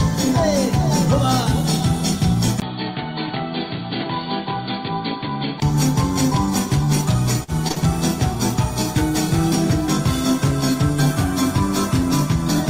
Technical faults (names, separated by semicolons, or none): input switched to a poorer device; burst of packet loss; short concealed packet loss